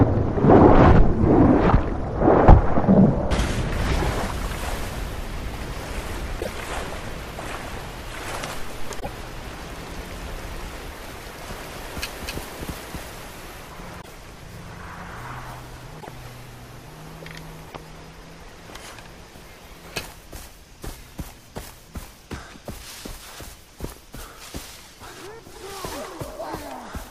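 At 6.40–6.48 s and 8.99–9.08 s, damaged data in a compressed stream makes the decoder lose frame sync. Each brief glitch appears on a spectrogram as a smeared broadband smudge with a hard edge where the decoder resyncs.

From 11.41 to 13.67 s a doubled audio track runs, likely a second capture through a slower path. A full-band copy at about equal level trails by roughly 300 ms, starting and stopping abruptly. The waveform shows repeated shapes with no decaying tail.

The same corruption returns at 14.01–14.09 s, 15.97–16.09 s and 17.65–17.77 s as further glitches.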